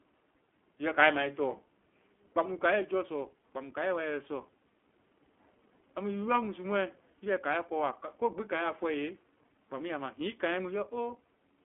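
From start to finish the speech sounds thin, slightly rough and synthetic, confined to roughly 250 Hz to 3.4 kHz. This is the iLBC codec, coding each 20 ms frame independently, which fits its 15.2 kbps mode, with plainly audible coding damage.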